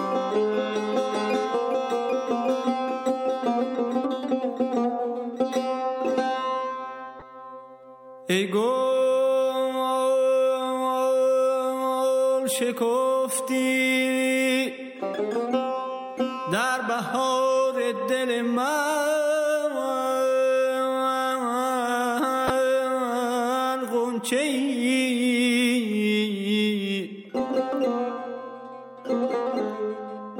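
Twice, a corrupt frame was decoded: flipped bits reached the decoder, which played the damaged data anyway. From 7.19 to 7.23 s, what sounds like a few frames gives a faint blip. At 22.47 to 22.50 s, seemingly a single frame, a much louder, sharp burst results.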